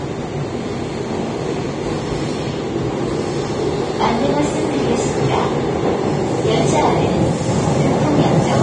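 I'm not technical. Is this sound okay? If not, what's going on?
No. The audio was most likely squeezed hard by Vorbis compression, a way of shrinking audio files that keeps a rough outline of the sound and saves fine detail only sparingly. Here it was pushed very hard, so from start to finish the highest sounds are cut away, and the remaining high detail turns into a hiss-like grain. The sound comes across dull yet fizzy, with rough tones and softened sharp edges.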